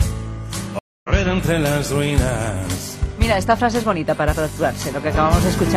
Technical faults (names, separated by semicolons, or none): stream reconnect